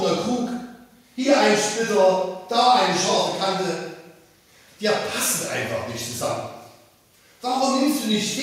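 No technical faults are audible.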